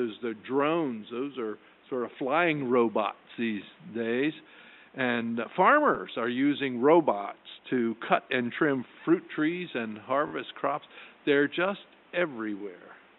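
Repeated frames: short runs of compressed frames were passed to the decoder more than once, so it replays the same slice of audio. This is heard as brief stutters at 5.94 to 5.97 s (10 ms repeated), 7.21 to 7.25 s (40 ms repeated) and 10.27 to 10.31 s, where a 20 ms block plays three times.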